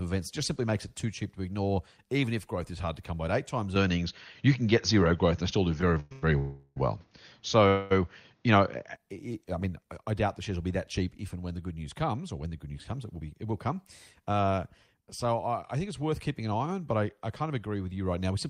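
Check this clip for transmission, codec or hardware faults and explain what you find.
Four kinds of fault are audible in this speech: a device switch, a stuttering stretch, two freezes and a speed-up.

From 3.76 to 8.95 s, starting just after "eight times" and clearing before "I mean I doubt", the sound goes boxy and dull. This is likely an input switched to a poorer device. Nothing comes through above 6.7 kHz, the level shifts by about 5 dB, and a new background noise sits about 45 dB below the speech. The switch has no silence. A codec bandwidth drop would narrow the band, but it would not bring a different tone, level and noise floor together like this.

Inside that stretch, from 5.81 to 6.24 s, come repeated stalls (stutter). The jitter buffer ran dry four times, and the receiver stretched the last sound to fill them. The fill totals 230 ms, the longest single gap is 110 ms, and over half the span is concealed. 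Nothing is lost, but the speech drags and judders. What separates this from a freeze is several short catches in quick succession rather than one continuous hold.

Call audio freezes follow at 6.38 to 6.78 s, lasting 376 ms, and at 7.68 to 7.93 s, lasting 225 ms. Each time the last sound is held as a fading buzz without dropping to silence, and then the speech resumes exactly where it stopped. The likely cause is packets delayed in transit. The delay grows by the length of each gap, and no audio is missing.

From 12.66 to 15.02 s, after "comes or when the" and up to "so I I think", a jitter buffer speed-up makes the speech run at about 108% speed. Short pitch-period slices are cut out repeatedly to drain surplus buffered audio, removing around a fifth of a second in all. It sounds hurried, but the pitch stays put, unlike a resampling or clock error, which would raise the pitch along with the speed.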